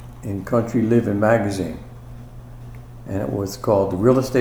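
Nothing stood out on listening; no technical fault could be heard anywhere in the clip.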